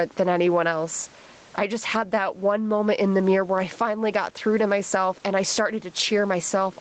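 From start to finish the speech shows gain pumping. The level rises and falls by around 15 dB as the talker moves between loud and soft passages, with each louder sound pulled down and the level recovering after it. Loud and quiet syllables sit closer together than they should, giving a squashed sound. The likely cause is a microphone gain set far too high, with a fast limiter or compressor clamping every loud sound.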